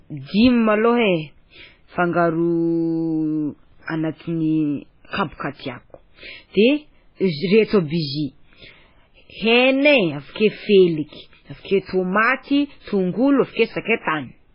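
MP3 compression affects the whole speech recording and is the likely cause of its dull, watery sound: nothing is left above about 5.3 kHz, and weak frequency lines drop in and out between frames. The heavy damage fits a starved bitrate near 16 kbps. Pre-echo occurs at 5.08 to 5.13 s, 13.52 to 13.56 s and 14.01 to 14.07 s. Each time a short hiss of 40 to 55 ms leads a sharp onset, because the block's quantisation noise spreads back into the quiet before the attack.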